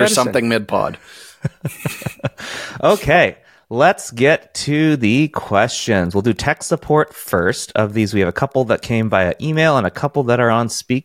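Right after "get to the", 5.50 to 10.25 s has Wi-Fi interference: the circuit rectifies a radio's 102.4 ms beacon into faint ticking well under the speech.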